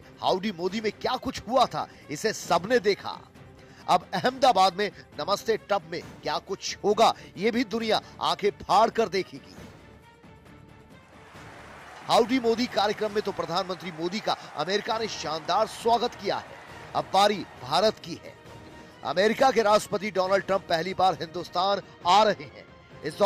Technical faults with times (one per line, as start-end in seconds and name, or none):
21.56-23.02 channel delay (comb filtering)